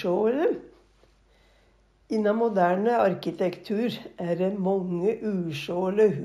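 Throughout, the top end sounds dull and carries a faint metallic shimmer on bright detail. This is imaging from linear upsampling. The straight-line interpolation points to a 16 kHz source raised to 44.1 kHz, leaving mirror images between 8 and 16 kHz, roughly 40 dB down.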